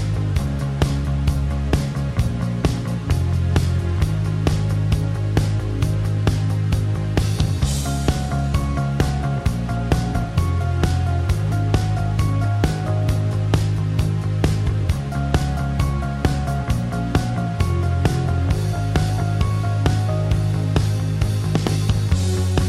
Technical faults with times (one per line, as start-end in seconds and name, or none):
none